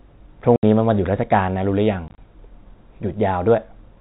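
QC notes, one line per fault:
0.56–0.63 s and 2.08–2.18 s, packet loss filled with silence: the first event is one solid 70 ms hole; the second loses about 70 ms in short pieces spread over 100 ms, the longest 30 ms. Every gap is a multiple of 10 ms, which points to 10 ms packets. The receiver inserts digital silence with no concealment, so the telephone-band audio (nothing above 4 kHz, from G.711 mu-law) stops and restarts with hard edges rather than smearing or repeating like packet-loss concealment.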